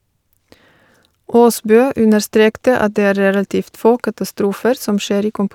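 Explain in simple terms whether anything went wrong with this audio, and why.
Nothing went wrong here; the speech comes through steadily, with no dropouts, glitches or odd noises anywhere in the recording.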